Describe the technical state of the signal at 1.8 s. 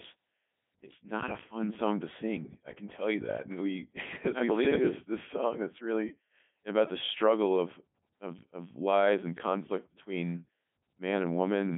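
At 1.8 s the speech is passing through a Codec 2 vocoder, as it does for the whole clip. The decoder rebuilds the sound from sine waves driven by pitch, voicing, energy and a spectral envelope, so the original waveform is gone, and the heavy damage fits its 3.2 kbit/s top rate. It sounds robotic and buzzy within a 150 Hz to 3.5 kHz band, with nothing above 3.7 kHz. A plain telephone band-limit would keep the natural voice texture instead.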